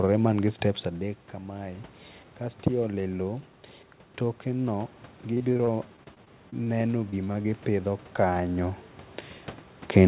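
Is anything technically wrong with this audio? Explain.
Yes. There is repeated packet loss, giving a robotic sound, from 5.34 to 6.69 s and again from 7.11 to 7.46 s. Short pieces of the speech go missing in quick succession, none longer than 26 ms. Each hole is bridged by stretching the preceding sound. The speech turns choppy.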